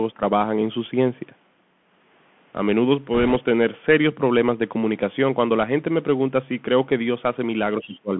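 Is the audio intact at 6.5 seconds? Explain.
No. At 6.5 s, as throughout, the speech carries plainly audible Bluetooth CVSD headset codec damage: a 3.4 kHz band limit, with one-bit up/down steps leaving scratchy s sounds and granular hiss.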